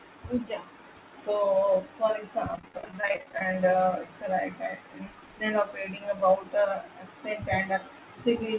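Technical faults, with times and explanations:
2.56–3.54 s, repeated packet loss (robotic sound): right after "so for" the sound turns choppy, with pieces missing. Dozens of dropouts, none over 20 ms (which fits lost 20 ms packets), were each patched by extending the previous sound, so about a third is filler.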